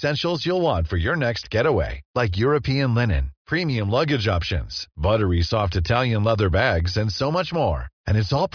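A speech recording, and nothing about it is technically wrong.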